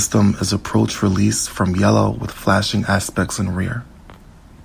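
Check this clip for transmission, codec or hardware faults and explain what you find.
Nothing stood out on listening to this recording.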